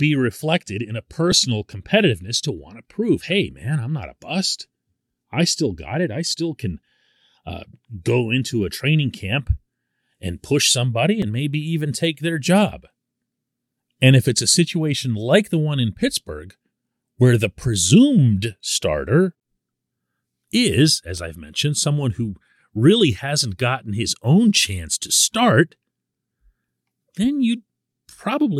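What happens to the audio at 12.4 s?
Two devices likely running on separate clocks, roughly 500 ppm apart, force buffer slips every 4.97 s from 1.32 to 26.14 s, each a pop in the speech.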